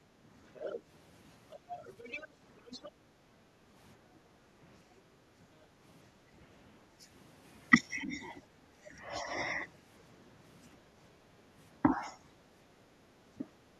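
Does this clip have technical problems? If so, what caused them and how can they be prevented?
Yes. The room background sinks by about 6 to 8 dB at 0.00 to 0.13 s, 2.91 to 4.43 s, 5.43 to 5.59 s and 6.23 to 6.35 s, then recovers. This is background gated by the echo canceller: it pulled the microphone down while the loudspeaker played. Gentler, slower echo suppression would prevent it.

A second, fainter voice, roughly 10 dB under the talker, surfaces at 0.54 to 0.81 s and 1.51 to 2.91 s. This is likely the other side's voice leaking through, because the canceller left residual loudspeaker echo in the microphone. Using a headset, or giving the canceller a longer echo tail, would prevent it.

The talker's own voice dips, by around 10 dB in patches across 8.02 to 9.61 s and by a few dB at 11.82 to 12.17 s. This is likely speech suppressed in double talk: with both sides speaking, the canceller attenuated everything. 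Better double-talk detection would prevent it.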